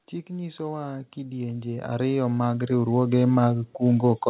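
Speech over a call line, and from about 0.27 s right through to the end the level keeps creeping up. That's the automatic gain rising: the AGC decided the input was too quiet and kept nudging its gain upward, so the voice and the background noise swell together over those four seconds rather than the talker getting louder. The band stops around 4 kHz, which fits a narrowband codec like G.711 A-law.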